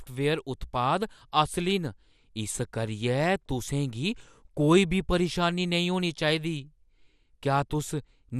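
From start to finish, the speech has likely passed through MP2 compression at a low rate, consistent with about 80 kbps, starving the upper sub-bands of bits. Nothing survives above 14.8 kHz, leaving it dull, with plainly audible gurgling, granular distortion.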